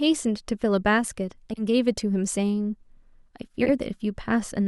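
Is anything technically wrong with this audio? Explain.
Yes. Two brief stretches of speech have frames out of order, at 1.49 to 1.62 s and again at 3.60 to 3.70 s. In each, two adjacent runs of frames were decoded in swapped sequence, which fits runs of four frames, so the stretch plays with its halves exchanged. The result is a short garbled flutter. No time is lost, and the timing on either side stays intact.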